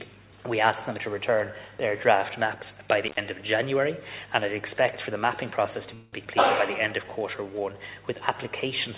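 At 3.04 to 3.21 s an intermittent contact breaks the signal. A loose connection opens for about 93 ms, so the sound drops out abruptly with a short crackle at each edge and only faint hiss in between. On a waveform this shows as a near-flat stretch bounded by sharp spikes. A spectrogram shows a pale gap with thin vertical broadband lines where the contact breaks and remakes.

From 5.94 to 6.15 s there is a call audio freeze, most likely caused by delayed packets leaving the jitter buffer empty. The receiver fills about 185 ms by extending the last sound into a fading buzz or hiss rather than silence. When the audio resumes, nothing has been lost, but the audio that follows is delayed by 185 ms. A spectrogram shows flat horizontal smears replacing the moving detail, and the waveform shows a repeating pattern that decays in level.

Just after, at 6.25 to 6.27 s, playback skips ahead. Around 70 ms of audio is dropped, and only about 8 ms of fill bridges the join, so the sound jumps forward with almost no gap and part of the event is simply missing. 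This recovers part of the delay added by the freeze. The waveform shows an abrupt change in shape at the splice. The spectrogram shows a vertical seam where the patterns on either side fail to line up.

From 7.04 to 7.74 s a jitter buffer slow-down stretches the audio. The receiver repeats single pitch periods to build up a reserve, adding 82 ms and running this stretch at 89% speed with no change in pitch. The sound is drawn out. Harmonics on the spectrogram stay at the same height but extend in time, and the waveform shows identical cycles repeated in a row. Throughout the clip nothing is present above 4 kHz, which fits the G.711 A-law call codec at 64 kbps.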